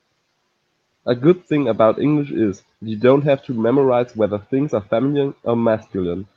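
Nothing here to flag: it's a stretch of speech that came through a call connection, and apart from the usual codec coloring and the top end stopping at around 8 kHz, you won't hear anything go wrong with it.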